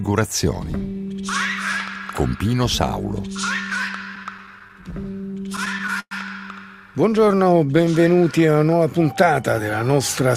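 From 4.15 to 6.14 s, packets arrived late and the jitter buffer kept running dry, causing repeated stalls (stutter): 18 gaps, the longest 109 ms, bridged by stretching the preceding sound. From 7.13 to 8.78 s, a jitter buffer slow-down rebuilds reserve by repeating tiny fragments, adding 164 ms, so the audio plays at about 91% speed without any pitch change.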